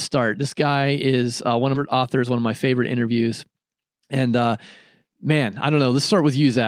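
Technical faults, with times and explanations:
1.75 s, skip ahead: right after "is uh one of", the speech lurches forward with no gap, losing roughly 0.4 s, and the two sides are spliced almost directly. A stretch was dropped while later audio already waited, cutting the delay by about that much.
1.95 to 3.08 s, jitter buffer speed-up: speech runs about 9% fast at unchanged pitch, sounding hurried. With excess audio queued, the receiver repeatedly trimmed tiny pitch-period slices, roughly a tenth of a second in total, to shrink its backlog.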